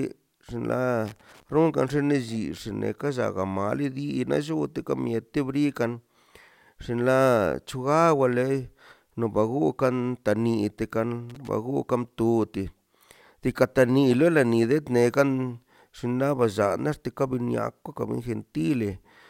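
At 1.06 to 1.43 s and again at 11.30 to 11.49 s, loose connector crackle breaks out. A worn contact is making and breaking, chopping the speech into irregular scratchy pops.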